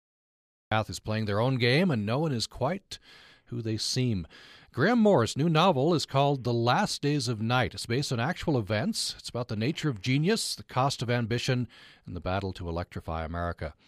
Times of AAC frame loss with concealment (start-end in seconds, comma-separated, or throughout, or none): none